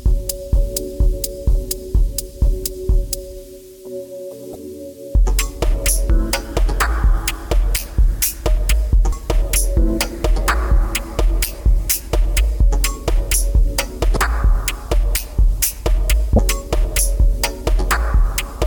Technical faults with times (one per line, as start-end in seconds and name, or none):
4.52-4.56 damaged data in a compressed stream
9.09-9.13 damaged data in a compressed stream
14.13-14.17 damaged data in a compressed stream
16.36-16.39 damaged data in a compressed stream